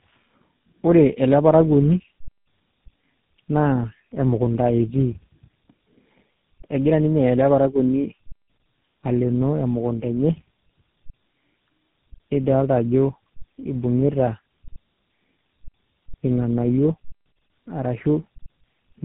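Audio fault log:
Throughout: tandem speech coding. The speech passes through three speech coders in a row, CVSD at 64 kbit/s, AMR-NB at 7.4 kbit/s and finally GSM full rate at 13 kbit/s, with G.711 A-law links between them. Each coder re-encodes the previous one's already damaged output, so the errors stack up. The result is rougher and more warbly than any single stage, and muffled, with nothing above 3.8 kHz.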